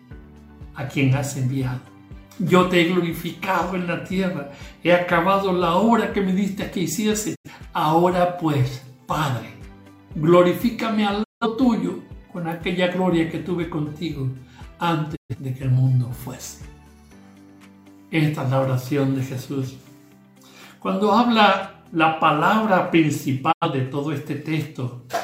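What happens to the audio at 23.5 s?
A digital broadcast dropout runs from 23.51 to 23.67 s. The receiver stopped getting usable frames, either because the signal was lost or because frames failed their checksum, so it muted the output instead of playing corrupted data. The sound fades out over about 20 ms and leaves a hole of roughly 85 ms, which fits two lost frames, before the audio comes back. Whatever was broadcast during that gap is simply gone.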